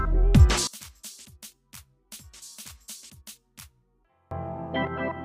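From 0.67 s to 4.31 s the sound collapses to a faint remnant, dropping by about 28 dB, with the centre almost gone, so what's left is a faint copy before full level returns. This points to one channel inverted: the likely cause is one stereo channel with reversed polarity, so when left and right are summed to mono their shared content cancels and only the difference between them survives.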